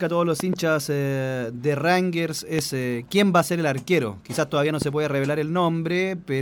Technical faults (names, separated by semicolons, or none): loud pop